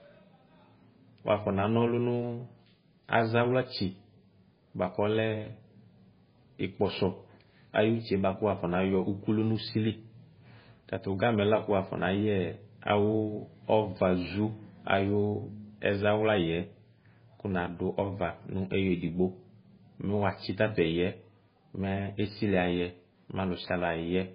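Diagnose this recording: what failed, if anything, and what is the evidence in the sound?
The fault sits at the codec stage, and it runs through the whole speech recording. Nothing is present above 5 kHz. The treble stops at a hard, fixed ceiling. The damage is heavy: the speech sounds watery and swirly, and s sounds turn metallic and chirpy. The likely cause is MP3 compression at a very low bitrate, which fits something near 16 kbps. Starved of bits, the encoder cut the top band and dropped weak frequency lines, which flicker frame to frame.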